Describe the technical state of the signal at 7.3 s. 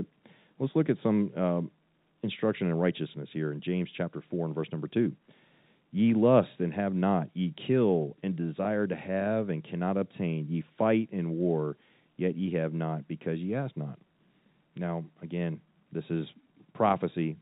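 At 7.3 s the speech is intact, with nothing beyond the ordinary 4 kHz ceiling of the G.711 telephone coding it passes through.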